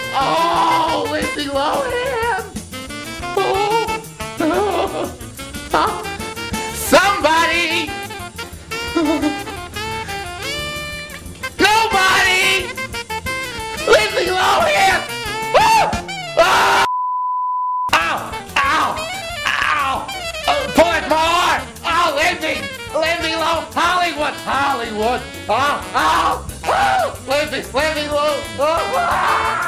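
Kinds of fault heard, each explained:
Nothing here stands out as a fault; the sound just runs along steadily without any glitches, dropouts or odd artefacts catching the ear.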